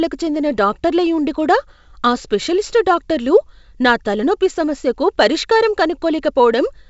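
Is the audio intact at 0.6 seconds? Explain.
Yes, the audio is intact at 0.6 seconds, with the G.722 wideband telephone coding at 64 kbit/s carrying the speech normally there and its band topping out near 7.7 kHz.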